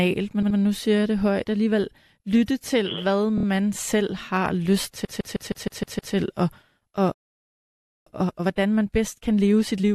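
At 0.42 to 0.58 s the speech stutters from repeated frames. A block of about 78 ms, consistent with three frames of roughly 26 ms each, is decoded twice more. It adds 157 ms.

The same fault recurs at 3.37 to 3.45 s. Here a single 26 ms block plays three extra times, adding 78 ms and giving a short rapid stutter.

A far longer run of repeated frames follows from 5.04 to 6.14 s. A 157 ms block loops seven further times, adding about 1.1 s of audible, rhythmic repetition.

At 7.12 s a playback stall cuts the output to silence for 0.94 s, most likely a buffer underrun or blocked audio thread. The audio resumes at 8.07 s.

From 8.07 s to the end, time-compressed catch-up drains the backlog. The player excises and cross-fades small segments, so the speech runs at about 1.25 times normal speed with pitch unchanged.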